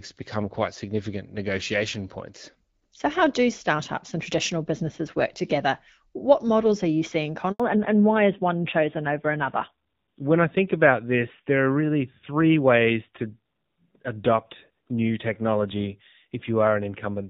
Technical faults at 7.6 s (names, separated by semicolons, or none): handover gap; fallback to narrowband